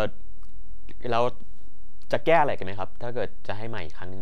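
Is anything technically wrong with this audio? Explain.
Yes. A DC offset runs through the whole of this speech clip, from start to finish. The entire waveform sits displaced from zero by a constant amount, at about -21 dBFS. That fixed shift isn't audible as a sound in itself, but it shows up as steady energy at 0 Hz, the very bottom of the spectrum. It also eats into headroom, because the peaks on one side of the waveform reach full scale sooner than they would if the signal were centred.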